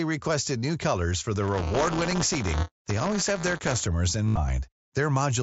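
Speech heard through a wideband Bluetooth headset link, which caps the band at 8 kHz and adds only light grain. From 1.42 to 3.84 s, right after "requested new colors for", a steady robotic buzz at 200 Hz rides on the speech. This is buffer tearing: the writer and reader of the playback ring buffer have slipped, so every 5 ms period carries a small slice, roughly a tenth, of audio from about 10 ms earlier, with hard joins that rattle at the buffer rate. At 4.26 to 4.37 s the sound briefly turns into a held, buzzy tone at full level, then warbles as normal audio resumes. That is concealed Bluetooth headset packet loss: about 98 ms of voice packets went missing across a 120 ms span, with the longest gap 75 ms, and the receiver filled them by repeating the best-matching recent stretch of waveform.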